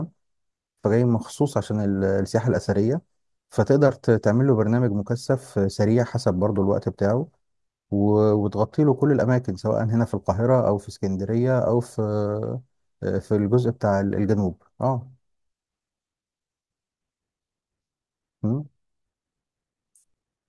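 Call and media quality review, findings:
No audible faults found in the speech on review; nothing to raise against any component.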